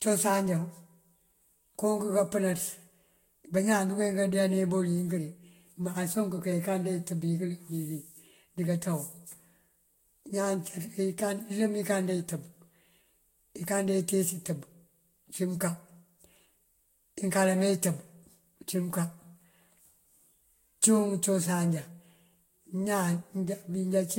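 Throughout, the speech is swirly, hollow and smeared, with blurred attacks and nothing above 16.6 kHz, likely generation loss from roughly seven lossy re-encodes.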